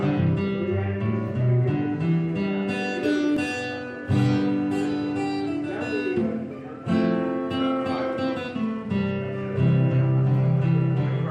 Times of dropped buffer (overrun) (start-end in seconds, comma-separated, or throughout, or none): 3.37